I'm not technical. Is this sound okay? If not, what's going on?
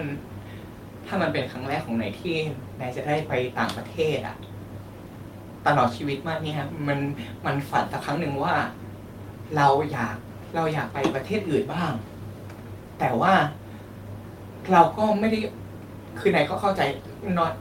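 Yes, no faults here.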